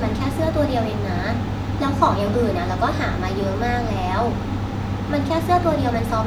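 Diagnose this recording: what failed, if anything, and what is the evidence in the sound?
Nothing in this speech recording points to a failure at any stage; there's no fault to diagnose here.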